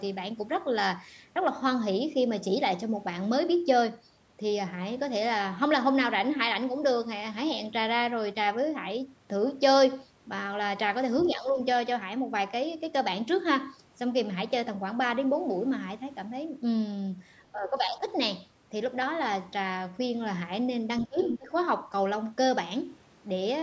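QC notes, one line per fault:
11.3–11.59 s, speech suppressed in double talk: the talker dips by about 10 dB. Both sides were likely talking, so the echo canceller turned everything down.
17.52–18.06 s, speech suppressed in double talk: a half-second dip of about 10 dB, likely the echo canceller ducking the talker during overlapping speech.
21.01–21.21 s, speech suppressed in double talk: a deep cut of about 25 dB. The voice nearly drops out, likely from the canceller reacting to simultaneous talk.
21.21–21.39 s, other side's voice leaking through: a brief scrap of the far voice, about 10 dB below the talker, likely loudspeaker echo the canceller failed to remove.
21.38–21.52 s, speech suppressed in double talk: the talker dips again by about 15 dB, likely the canceller turning down the talker during overlapping speech.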